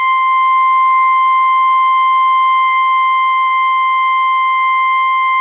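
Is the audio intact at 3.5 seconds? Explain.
No. From 3.47 to 3.53 s the music has a short concealed packet loss. About 30 ms of audio never reached the decoder in time. The receiver covered the gap with about 32 ms of made-up sound, extending the last stretch of music, then blended back into the real signal. You hear a brief smear or wobble at that point. The call path around it carries nothing above 4 kHz, which fits G.711 mu-law at 64 kbps.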